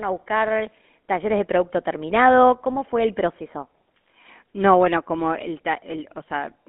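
From start to finish the speech carries GSM full-rate codec damage, plainly audible. The band is cut to roughly 200 Hz to 3.4 kHz, and on top of that the codec rebuilds the voice from a vocal-tract model driven by a sparse, regular pulse excitation. The result is a buzzy, gravelly grain, which fits a 13 kbps full-rate coder. Simple telephone band-limiting would sound muffled but clean, and newer codecs sound smoother rather than rasping.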